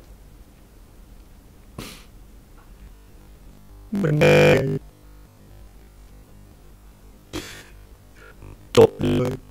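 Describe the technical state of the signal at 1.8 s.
The audio is intact at 1.8 s, with no fault audible at that moment.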